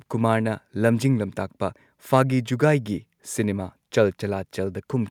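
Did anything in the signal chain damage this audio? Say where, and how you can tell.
No, nothing in the signal chain stood out as damaging this speech on listening.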